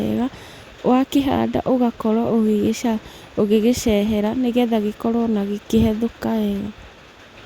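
No technical faults can be heard anywhere in the recording.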